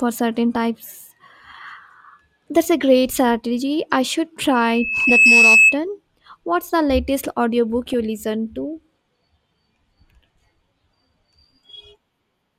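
At 4.51 s a loudspeaker feedback squeal starts. The microphone is picking up its own loudspeaker, and the loop gain passes one at 2.6 kHz. A pure tone swells for under a second, peaks at roughly 10 dB above the speech, and is cut at 5.78 s.

During that squeal, from 5.00 to 5.10 s, DAB burbling appears, and again from 7.86 to 7.94 s. Weak reception lets a small share of bit errors slip past error correction. Short blips of noise land in single sub-bands across six and then eight frames, giving brief burbling over the speech.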